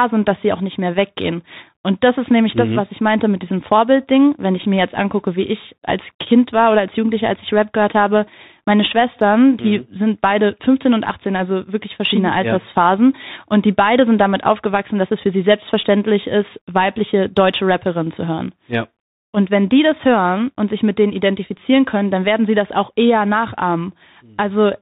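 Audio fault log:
Throughout: Bluetooth CVSD headset codec. The speech is band-limited to 4 kHz, with scratchy s sounds and granular hiss from one-bit adaptive-step delta coding at 64 kHz.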